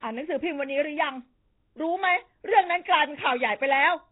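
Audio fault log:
throughout, Nellymoser compression: the speech carries a rough, hissy halo and a smeared, underwater blur, with nothing above about 3.8 kHz. The likely cause is a Nellymoser Asao encoder around 16 kbps; emptied bands refilled with noise give hiss, unlike MP3's swirly warble.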